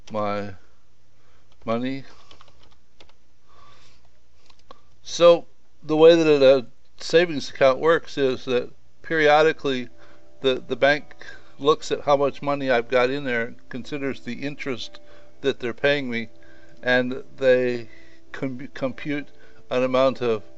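No faults can be heard anywhere in the clip.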